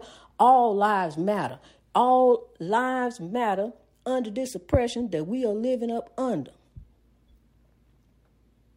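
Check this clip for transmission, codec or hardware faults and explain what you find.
Nothing faulty can be heard anywhere in the speech.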